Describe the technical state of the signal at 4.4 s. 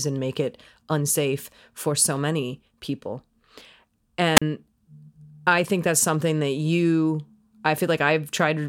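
At 4.4 s the speech passes through a wireless microphone squelch dropout lasting from 4.36 to 4.42 s. The analogue radio link fades, the receiver's squelch closes, and the output is muted for about 39 ms before the signal recovers. The brief swell of hiss or static just before the near-silent hole separates it from a digital packet dropout, which cuts to silence abruptly with no rising noise first.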